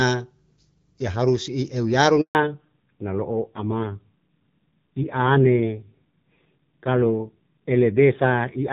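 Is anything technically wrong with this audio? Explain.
Yes, there are two faults in this speech clip, both at the same moment.

At 2.21 s, right after "ya harus i euyaru", there is a handover gap lasting 140 ms, to 2.35 s. While the call was being passed from one network to another, no speech frames got through, so the voice fades out within a few tens of milliseconds and the line sits silent until the new link comes up. Whatever was said in that window is gone rather than garbled.

From 2.35 s to the end of the clip, the call shows a fallback to narrowband. Before the switch, the speech carries the light coding character of the AMR wideband (HD Voice) codec, which fits a rate around 12.65 kbit/s. After it, nothing remains above 4 kHz. The voice loses its sibilance and air, sounding muffled and coarser, which fits a drop to AMR narrowband at a low rate near 5.9 kbit/s.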